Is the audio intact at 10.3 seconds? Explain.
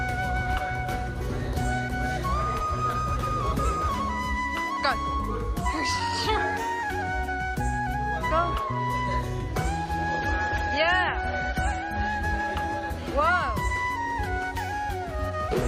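No, 10.3 s falls in an adaptive stream at a lower bitrate (10.09–12.09 s). Treble is gone above 13.4 kHz, so a spectrogram shows a sudden flat ceiling with no gap.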